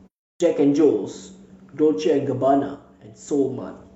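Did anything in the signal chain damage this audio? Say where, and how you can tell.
Yes, in three places. At the playback end there is a clipped start after a pause: the speech begins at 0.34 s out of a 0.34 s silence, and its onset is missing, with roughly 63 ms swallowed before audio appears at 0.40 s. The output device went idle during the silence and needed that time to wake and relock, so the first sounds of the word never reached the output.

From 2.75 s to 3.28 s the level drops abruptly by about 6 dB and then returns just as sharply. That step size is what a mono sum produces when one stereo channel goes missing and only the other contributes. The likely cause is one channel dropping out somewhere in the wiring, interface or driver path, and any content present only in that channel is absent for the half second.

At the codec stage, damaged data in a compressed stream appears from 3.81 s to 3.87 s as a brief glitch. 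Corrupt or missing bytes in the encoded stream made the decoder misread the frames there and lose sync until it found the next valid frame header.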